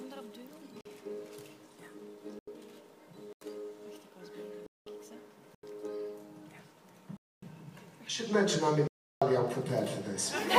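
Abrupt dropouts at 0.81, 2.39, 3.33, 4.67, 5.55, 7.17 and 8.88 s, lasting 43 to 341 ms, are blocks of digital silence. Missed buffer fills likely zeroed whole blocks, with several lengths fitting 4096-sample blocks.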